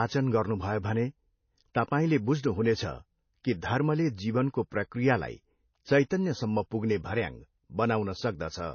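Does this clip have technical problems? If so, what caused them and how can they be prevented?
Yes. Throughout, the speech sounds watery, with no energy above 6.6 kHz, likely from MP3 compression at a bitrate near 24 kbps. The spectrogram shows a hard ceiling and flickering patches. Encode at a higher bitrate or use a better codec.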